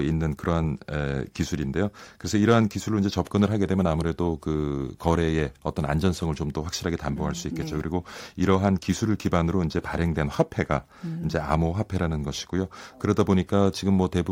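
Hard clipping hits this speech recording at 2.51 to 2.57 s, 8.50 to 8.67 s, 9.34 to 9.37 s, 10.40 to 10.61 s and 13.2 s. Each time, the loudest peaks exceed what a stage in the chain can carry, by only about 1 to 2 dB, so their tops are shaved flat. Those squared-off crests create high harmonics, heard as brief crackle on the peaks rather than continuous fuzz, since the overload is slight.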